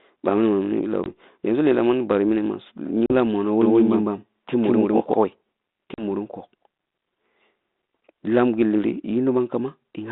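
Packet loss on the ADPCM call hits at 1.04 to 1.07 s (20 ms lost), again at 3.06 to 3.13 s just after "bari mini ma su" (40 ms), and at 5.94 to 6.04 s (40 ms). Each is a hard-edged silent hole. Afterwards the decoder's predictor is out of step, so the speech comes back slightly distorted before settling.

From 3.62 to 5.14 s there's a doubled audio track. A dry, full-band copy about as loud as the original trails roughly 150 ms behind, likely from a second, slower capture path, and it starts and stops abruptly.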